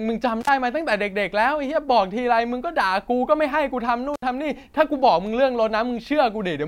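Intermittent contact drops the speech out twice, first at 0.41 to 0.49 s and again at 4.14 to 4.22 s. A loose plug or cable connection briefly loses contact, so the signal path opens for about 51 ms and then 68 ms. Each gap is bracketed by crackle as the contact breaks and remakes, and faint hiss fills the silence while the line is open.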